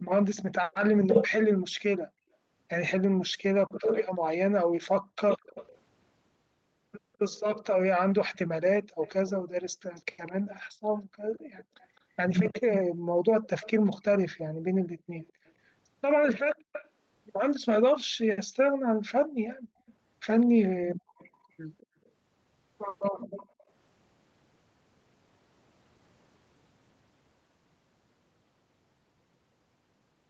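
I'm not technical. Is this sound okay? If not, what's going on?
No, not quite. There are two separate problems.

The first is an echo leak. A faint copy of the speech trails about 0.21 seconds behind the original, from 0 to 0.75 s, again from 5.55 to 17.59 s, and once more from 19.49 to 23.64 s. It's quiet, a bit like someone repeating the speech softly in the background. The likely cause is that the other person had their call on a loudspeaker, and their echo canceller didn't fully scrub that sound out of their microphone, so some of it came back down the line.

The second is background gated by the echo canceller. At times the room sound behind the speech suddenly drops away almost to silence, then comes back: between 5.01 and 5.55 s, 8.84 and 10.54 s, 12.92 and 19.87 s, and 23.24 and 23.58 s. Most dips are brief, about a third of a second, but the long stretch adds up to roughly two seconds of missing background. 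That happens when the echo canceller clamps the microphone right down while the loudspeaker is playing, then lets go.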